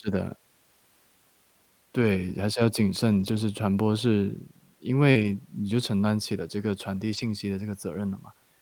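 At 2.01 to 2.03 s there's a lost packet rebuilt from error correction: the next packet carried a low-bitrate copy, so nothing drops out, but those 20 ms come through rougher and noisier. It happens again from 3.11 to 3.37 s, a longer stretch pointing to several separate packets. Around 5.11 to 5.17 s there's short concealed packet loss. About 40 ms never arrived, and the decoder stretched the last sound across the hole before blending back, giving a brief smear or wobble. Overlapping that, from 5.15 to 5.33 s, another 100 ms comes back from error-correction copies with the same grainy, rough texture, and the final rebuilt patch runs from 7.13 to 7.27 s.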